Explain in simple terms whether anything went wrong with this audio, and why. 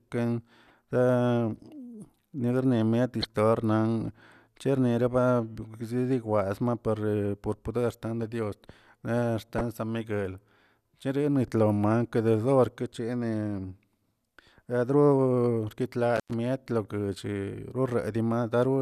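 Three brief glitches interrupt the speech: a faint blip at 0.68 to 0.70 seconds, then two louder squeaky chirps at 3.22 to 3.25 and 9.58 to 9.65 seconds. Each is a corrupt frame decoded. Speech is stored in small compressed chunks, and when a few of those chunks got scrambled, the player played them anyway. It rebuilt the sound with the wrong settings, so stray energy landed in the wrong pitches for a split second.

Later, from 16.16 to 16.34 seconds, the sound crackles and then drops out for about a tenth of a second, leaving only faint hiss before it returns with another crackle. This is an intermittent contact. A loose cable or plug lost its connection for a moment, so the signal was cut off. The crackles come from the metal contacts breaking and then touching again.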